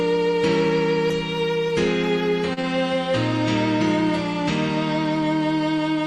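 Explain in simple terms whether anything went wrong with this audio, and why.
A short stall from a late packet happens at about 2.53 to 2.59 s. One piece of the audio arrived late, so the player held the last sound for about 35 ms while it waited. Then it carried on from the same spot. You hear a brief stretched moment with a slight buzz or dip, but nothing is lost.

Short concealed packet loss follows right after, at about 2.61 to 2.65 s. About 20 ms of audio never arrived in time, so the receiver invented a stand-in by continuing the previous sound and blending back in. It shows up as a quick smear or wobble.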